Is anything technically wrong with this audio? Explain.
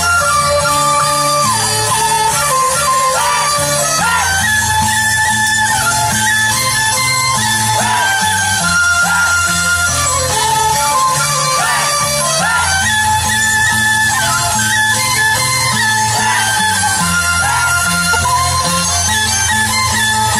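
Yes. Compressed frames were skipped twice, at about 0.99 s and again from 18.10 to 18.18 s. Whole frames of the encoded stream were never played, either missing from the file or rejected by the decoder as damaged, so the audio jumps ahead by roughly a twentieth of a second each time. At each join a short stretch of the sound is cut out.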